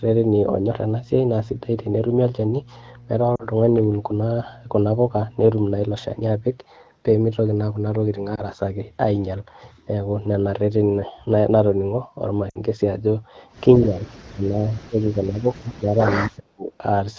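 From the start until 6.31 s a steady 60 Hz mains hum sits under the speech, around 25 dB below it. Power-line current is leaking into the signal path, probably through a ground loop. Unlike traffic rumble or handling noise, it is a fixed pitch that does not change with the talker.

Lost AMR speech frames occur at 3.35 to 3.43 s (40 ms), 8.35 to 8.43 s (20 ms) and 12.49 to 12.58 s (60 ms). These fit two, one and three missing 20 ms frames. When a frame failed its check, the decoder repeated the last good pitch and spectral shape at lower gain. The single lost frame gives a brief dip or warble, while in the longer runs the sound drops to near silence within two frames. That sets it apart from a plain dropout or clipped packet. Each event ends with a moment of weak, rough sound as the decoder recovers.

From 13.79 to 14.12 s, and again from 14.29 to 16.71 s, the speech dips by about 15 dB and then by as much as about 25 dB. 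The likely cause is speech suppressed in double talk: the far side was talking at the same time, and the echo canceller turned this talker down along with the echo. Unlike a gate or a network gap, the level goes up and down in pieces.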